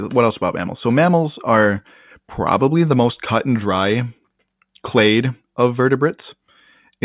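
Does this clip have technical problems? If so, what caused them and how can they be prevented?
No, nothing in this speech recording points to a technical fault, so there is nothing to trace to a cause or to guard against.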